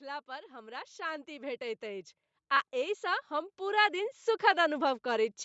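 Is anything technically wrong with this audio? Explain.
Yes. Throughout, the speech has a breathy, grainy edge on its upper frequencies, likely from Bluetooth LC3 compression at a rate that fits about 48 kbps; unlike hiss, the graininess tracks the voice itself. The band stops near 8 kHz, which is simply the call's microphone processing.

From 0.05 to 2.15 s and again from 2.7 to 5.02 s, automatic gain rising lifts voice and background together, by about 10 dB and then about 7 dB. The slow, shared swell separates it from someone simply speaking louder.

At 2.56 s, lost LE Audio frames leave a brief noisy smear: the decoder refilled one missing 7.5 ms frame with the previous spectrum, rather than leaving a clean dropout.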